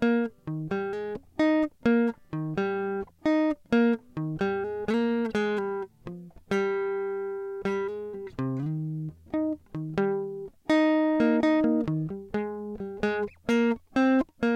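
No technical faults can be heard anywhere in this music. Nothing in the recording or its playback draws attention to itself at any point.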